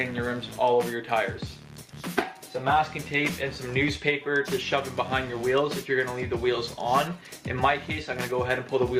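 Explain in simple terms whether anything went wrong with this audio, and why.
Nothing went wrong with this audio; there are no faults to point to anywhere in it.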